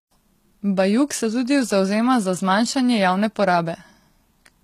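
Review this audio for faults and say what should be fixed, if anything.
Throughout the speech, sibilants sound gritty and metallic, and nothing is present above about 14.9 kHz. This is likely HE-AAC compression: the encoder kept only the lower spectrum and rebuilt the treble by copying lower bands upward, and at this level of damage the sound points to a low bitrate near 20 kbps. Unlike a plain low-pass filter, which leaves dull but clean highs, this treble stays bright while its harmonics fail to line up. To prevent it, encode speech at a higher bitrate with standard AAC, or keep a lossless master.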